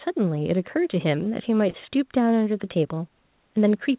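Short concealed packet loss at 1.70 to 1.76 s: about 40 ms of the call arrived too late to decode, and the receiver covered roughly 36 ms of it by extending the preceding sound before blending back, leaving a brief smear in audio already capped near 4 kHz.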